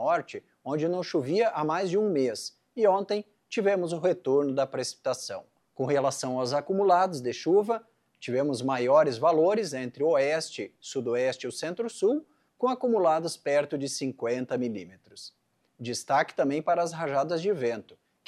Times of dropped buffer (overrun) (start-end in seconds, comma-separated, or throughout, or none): none